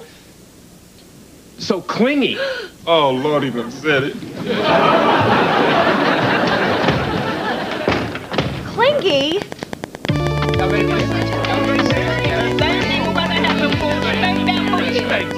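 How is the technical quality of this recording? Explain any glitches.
The recording has one clear fault. From 8.99 s to 15.32 s, a train of clicks ticks steadily, about nine per second. Roughly seventy similar pulses rise around 10 dB above the sound, likely from interference.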